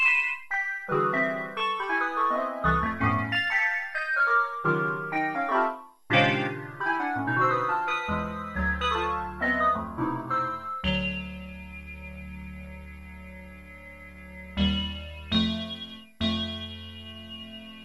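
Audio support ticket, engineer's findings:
No faults found on listening. Nothing in the sound to attribute to a component or mechanism.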